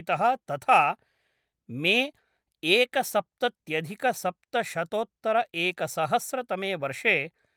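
No technical faults can be heard anywhere in this recording.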